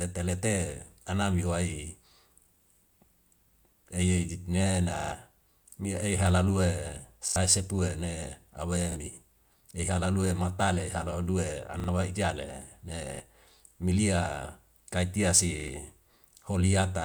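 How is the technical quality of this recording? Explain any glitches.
The speech has six repeated buffer stutters, at 4.96–5.12, 7.28–7.36, 8.92–8.96, 11.8–11.88 (just before "wa ijale"), 13.16–13.2 and 15.6–15.68 s. Late audio made the device replay its last chunk, which fits a 40 ms buffer, one to four times. Each sounds like a brief stutter and appears as identical repeating waveform blocks with hard edges and vertical lines on a spectrogram.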